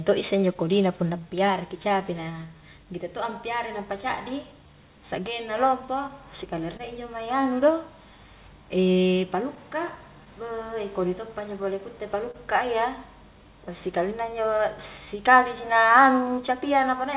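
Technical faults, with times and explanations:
Throughout: clock drift between sender and receiver. The sending clock runs about 1.5% slower than the receiving one, so the jitter buffer keeps draining and must be topped up, which leaves a faint, recurring unevenness in timing across the whole speech clip.
1.20–15.74 s: repeated timing corrections. To keep pace with the slow sender, the receiver repeatedly stretches short pieces, playing at about 99% speed and adding around 100 ms in all. The tempo feels slightly unsteady, with small, irregular hiccups rather than one obvious edit.
3.33–12.36 s: scattered short gaps. Around ten packets arrive too late or not at all, each patched by extending the preceding sound, roughly 100 ms concealed in total, the longest a few tens of milliseconds. These come through as brief ticks or smears in otherwise continuous audio, band-limited to nothing above 4 kHz by the G.711 call codec.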